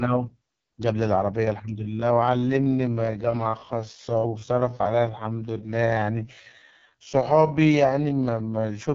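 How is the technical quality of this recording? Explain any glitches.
Quality is poor: the speech is heavily degraded throughout, and it slows down partway through.

AMR wideband (HD Voice) codec, throughout: the speech is coded at a very low rate, which fits AMR-WB at 6.6 kbit/s, its lowest mode. A pulse-excited vocal tract model this starved leaves the speech rough and raspy, with nothing above about 7 kHz and only noise-like fill at the top.

Time-stretched section, from 1.79 s to the end: the pace abruptly drops to about 0.65 times normal speed while the pitch stays unchanged, likely from software lengthening the audio by repeating short pieces. That repetition gives the speech a dragging, drawn-out quality.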